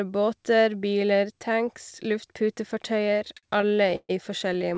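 From 3.12 to 4.11 s, then 4.49 to 4.77 s, there's repeated stalls (stutter). Late packets kept draining the jitter buffer, so the receiver stretched held sound, up to 133 ms at once. It drags and hiccups, though nothing's lost.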